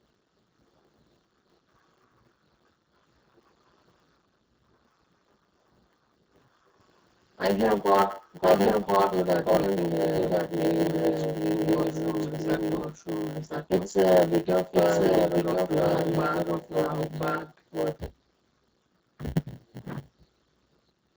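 Speech runs through the whole recording with heavy Speex codec damage. The voice is hoarse and grainy, which points to a very low setting of around 6 kbps where the CELP coder has almost no bits left for the excitation signal. Any band above 4 kHz carries only a shaped, noise-like fill, so sibilants and breath have no real detail. A block size mismatch (padded) is also present throughout. One stage hands over shorter blocks than the next stage reads, and the shortfall in each block is filled with silence. The result is a steady 100 Hz buzz at the block rate, and the speech plays slower by a factor of 0.919, roughly 8 percent, with its timbre unchanged. From 8.43 s to 18.09 s a doubled audio track sits under the speech. A second full-band copy at roughly the same level trails the original by about one second. It has no decay or room colouring, and it cuts in and out abruptly at those two times. 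That behaviour is likely caused by the same signal being captured again through a slower path, or by an edit that left two copies out of alignment.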